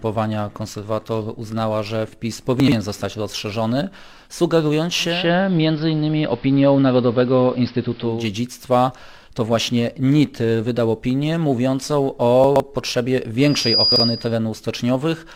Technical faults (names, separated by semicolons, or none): chunks out of order; digital radio blending to analogue; loudspeaker feedback squeal